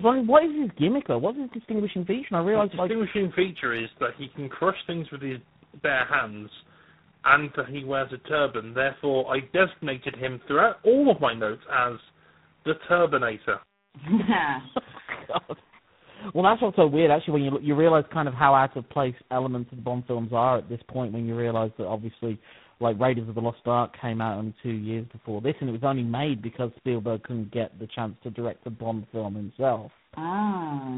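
Speech with tandem speech coding throughout: G.729A then G.726 at 24 kbit/s compound roughness and warble beyond any single codec, with nothing above 3.8 kHz.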